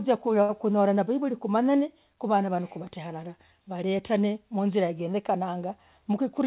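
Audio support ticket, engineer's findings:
Short stall from a late packet, 0.42 to 0.51 s: sound held about 68 ms too long, slight buzz or dip. Jitter buffer ran dry, receiver stretched the last sound until the packet showed up, then carried on with nothing lost. The 4 kHz ceiling throughout fits a G.711 call path.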